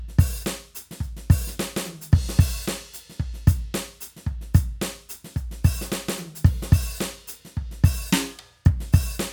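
No technical faults can be heard anywhere in the music.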